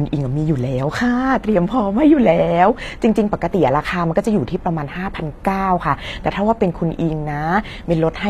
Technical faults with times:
0.00-8.29 HE-AAC compression

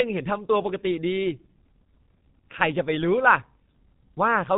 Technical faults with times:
0.00-4.57 G.723.1 codec

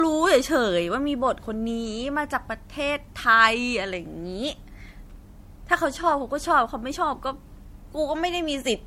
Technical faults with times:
0.00-8.86 generation loss

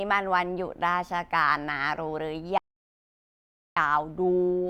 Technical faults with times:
2.58-3.76 audio dropout to silence

